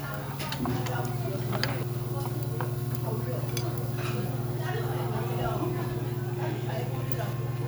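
At 1.83 s, audio missing between chunks: about 0.3 s skips, likely at a 3-second chunk boundary; the waveform shows a gapless splice.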